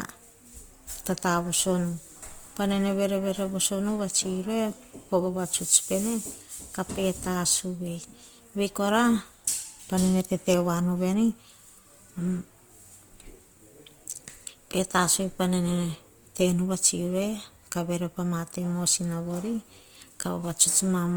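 Throughout this speech clip the sound has a rough, grainy, noisy texture, with tones turned gritty rather than clean, yet with little of the swirling, watery quality of MP3. The full bandwidth survives, with content up to about 20.1 kHz. This is likely Opus compression in its music (CELT) mode at a low bitrate, around 24 kbps, where starved bands are filled with noise or folded copies instead of being left empty.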